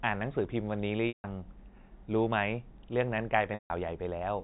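At 1.08 s the sound breaks up for about 160 ms, until 1.24 s. It happens again from 3.54 to 3.70 s. Both are packet loss with pitch repetition. Each gap fits a run of 20 ms packets going missing. The receiver loops the last pitch period to cover the hole. This gives a brief held buzz that fades to silence within about 50 ms. The speech then returns through a short cross-fade. It all sits inside a band-limited telephone sound.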